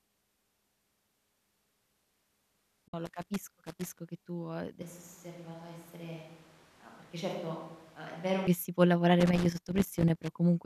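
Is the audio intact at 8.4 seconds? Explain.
No. At 8.4 seconds the speech is still inside a switch to a distant microphone that runs from 4.82 to 8.47 s, between "che tu ehm" and "si può". The close microphone's signal likely dropped out, leaving a far pickup. The sound turns hollow and roomy, loses bass, falls by about 10 dB, and carries room noise only around 20 dB below the speech. Unlike added reverb or filtering, level and noise floor jump abruptly at both edges.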